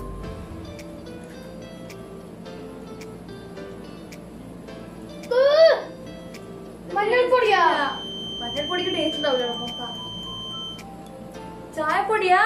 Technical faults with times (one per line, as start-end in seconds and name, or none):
7.55-10.84 feedback whistle